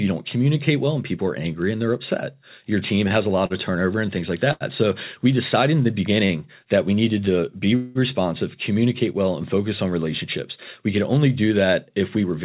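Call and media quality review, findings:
Short stall from a late packet, 3.08 s, 3.46 s, 4.52 s and 6.26 s (before "a lot of turnover", after "turnover and things like", between "we decided in the" and "that we needed"). Jitter buffer underrun; last sound held 21, 40, 85 and 41 ms, then resumes in place, nothing lost.

Call audio freeze, 7.76 to 7.98 s. Speech held for about 0.19 s as a fading buzz, with no true silence. Likely packets delayed in transit draining the jitter buffer; playback resumes where it stopped, adding a gap.

Jitter buffer speed-up, 12.16 to 12.41 s. Speech runs about 14% fast at unchanged pitch, sounding hurried. Receiver trims excess buffered delay by repeatedly cutting pitch-period-length pieces, a few tens of ms in total. Band-limited to 4 kHz throughout, consistent with G.711 mu-law.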